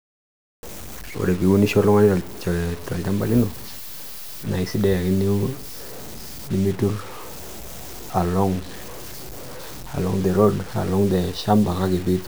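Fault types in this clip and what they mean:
Low bit depth without dither: A grainy, rasping distortion sits on the speech for the whole clip and shifts with it, coarse on loud syllables and gritty on quiet ones. The softest tails break up or sputter rather than fading smoothly, and the grit stays only about 20 dB below the speech. This is likely from very coarse quantisation, fitting about 6-bit truncation with no dither, so the rounding error tracks the waveform.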